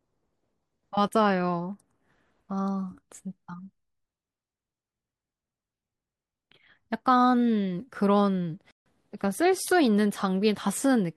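At 8.71 s the speech cuts out abruptly and the output stays silent for about 148 ms, resuming at 8.86 s. This is a playback stall. The gap is long enough to register as a clear hiccup in the flow rather than a click. The likely cause is the player briefly running short of buffered data, or its audio thread being blocked, so nothing reached the output until it caught up and carried on.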